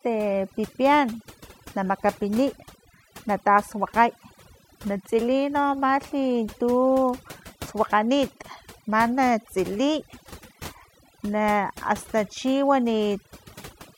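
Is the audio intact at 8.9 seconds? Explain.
No. At 8.9 seconds, as across the whole clip, overdone noise removal is audible. An over-aggressive noise reducer pulls frequency bands near its noise estimate far down, taking quiet speech detail with them. The background drops and breaks up into twinkling specks.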